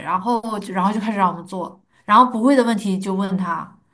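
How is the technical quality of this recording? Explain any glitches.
The speech recording's signal path holds up technically, with no glitches, dropouts or other faults to report anywhere in it.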